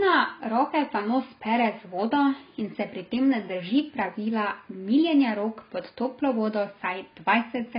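Speech that carries heavy AAC compression damage for its whole length: nothing reaches above about 5.1 kHz, so the sound is dull and muffled, and sibilants and sustained vowels take on a warbling, fizzy smear as spectral bands drop out or are refilled with noise. That swirling texture, rather than a clean low-pass dullness or the pre-echo of a transient-smearing codec, points to a frame-based transform codec, likely AAC-LC starved at a low bitrate around 16 kbps.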